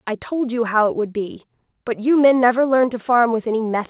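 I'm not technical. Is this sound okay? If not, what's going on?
Yes, nothing stood out on listening; the speech has come through a phone-style call connection, which keeps only the sound below about 4 kHz, so it has the narrower, telephone-like tone you'd expect from that kind of line.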